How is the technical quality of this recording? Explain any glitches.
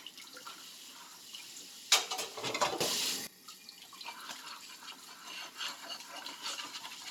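There is one clear glitch: a sudden gain jump from 2.81 to 3.27 s. The level steps up by about 16 dB between one sample and the next, likely a gain setting or bit shift applied without a ramp, so sound and background noise rise together until dropping back.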